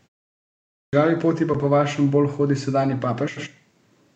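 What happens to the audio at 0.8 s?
Clipped start after a pause, 0.71 to 0.93 s: the output device sleeps through silence and wakes late, swallowing 220 ms, so speech begins abruptly.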